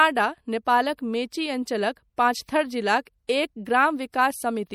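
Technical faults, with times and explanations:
Throughout, MP3 compression: the damage most likely comes from an MP3 encoder that was short of bits, at a rate that sounds like about 64 kbps. With too few bits to go round, the encoder dropped weaker frequency lines, and these switch on and off from frame to frame. This gives the speech a plainly audible watery, swirling texture, with chirpy s sounds and smeared attacks. Nothing is present above 20.8 kHz.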